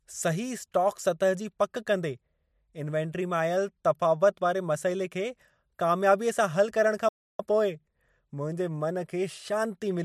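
A speech recording with a playback stall: from 7.08 to 7.40 s the sound cuts to silence for about 0.31 s, most likely because the player ran out of data or was blocked. Unlike a brief dropout, the gap lasts long enough to be heard as a pause.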